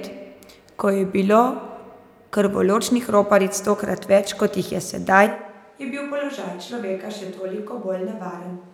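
A speech recording with a switch to a distant microphone at 5.27 s that lasts to the end. At that point the sound abruptly turns roomy and hollow, loses low-frequency body, and drops by about 10 dB, while room noise rises to roughly 35 dB below the speech. The likely cause is that the close microphone's feed failed or was dropped, leaving only a pickup placed much farther from the source, such as a camera microphone.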